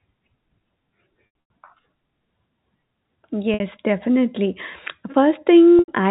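Packet loss with pitch repetition occurs at 1.26–1.50 s, 3.54–3.60 s and 5.79–5.88 s. The receiver bridges each gap by looping the last pitch period, so the speech briefly holds with a buzzy tone. The first stretch loses 180 ms in scattered bursts of up to 90 ms, long enough to fade toward silence.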